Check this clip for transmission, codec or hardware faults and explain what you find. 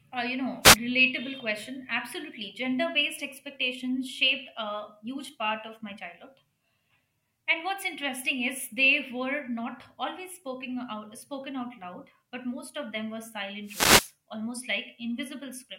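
Two wireless microphone noise hits break into the speech, at 0.62 to 0.77 s and at 13.64 to 14.13 s. In each, the FM radio link fades as reflected signals cancel, so receiver noise surges up, heard as a brief swish of static; the later one lasts about half a second. On a spectrogram each shows as a broadband vertical smear of hiss over the harmonics; the waveform shows a dense noisy patch.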